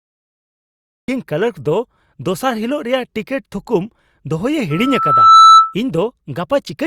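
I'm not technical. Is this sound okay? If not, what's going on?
No. Cut-off start, at 1.08 s: the audio is silent until 1.08 s, then the speech jumps in partway through a sound with no natural lead-in. The recording began a moment late, so the start of that sound was never captured.

Loudspeaker feedback squeal, from 4.71 to 5.75 s: a single high whistle near 1.3 kHz swells up over most of a second until it is much louder than the speech. The microphone picked up its own loudspeaker, and that tone kept feeding itself.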